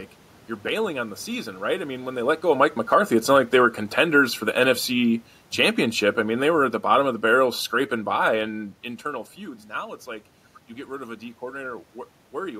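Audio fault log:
2.44–8.49 s, automatic gain falling: from "mean when they let" to "internal feuds" the level sinks by about 8 dB as the gain control backs off an input it judged too loud or too noisy. The room noise sinks too, unlike when a talker moves away.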